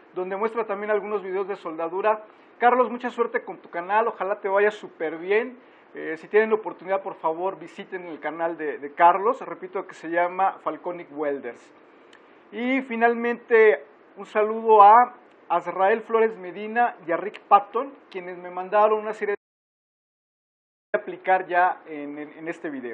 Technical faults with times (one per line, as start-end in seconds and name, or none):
19.35-20.94 audio dropout to silence